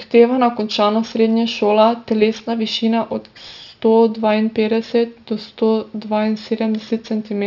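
From start to finish, sibilants sound gritty and metallic, with spurious tones about 25 dB below the speech and energy running hard up to 6 kHz. This is aliasing. Content above 6 kHz folded back to wrong pitches, which points to unfiltered resampling down to 12 kHz.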